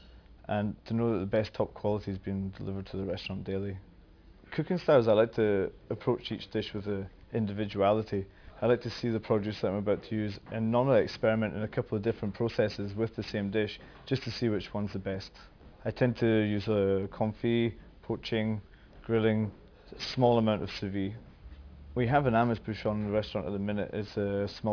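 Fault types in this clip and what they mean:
aliasing: The sound was resampled down without a proper low-pass filter first, which fits a drop to 11 kHz sampling. Content above 5.5 kHz folds back as false, unrelated tones, about 20 dB below the signal. High sounds turn gritty throughout.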